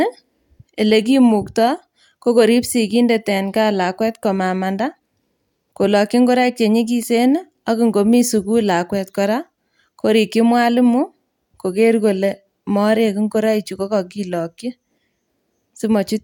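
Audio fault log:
No faults are heard anywhere in this speech recording. There is nothing in it to enter in the log.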